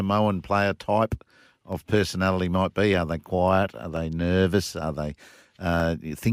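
Four single clicks punctuate the speech: at 1.73 s between "player type" and "personality might be", at 2.94 s after "personality might be", and at 3.97 s and 5.8 s. Each is likely dropped samples, a fraction of a millisecond lost, making the waveform jump abruptly.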